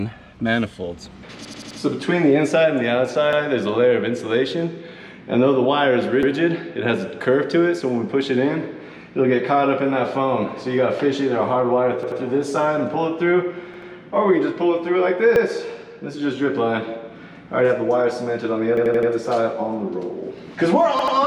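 Repeated buffer stutters hit at 1.45, 3.33, 6.23, 12.03, 13.74, 15.36, 18.77 and 20.99 s. Fresh audio arrived late, so an 85 ms chunk (which fits a 4096-sample buffer) replayed with hard joins. It played one extra time at 3.33, 6.23 and 15.36 s, two extra times at 12.03, 13.74 and 20.99 s, and four extra times at 1.45 and 18.77 s.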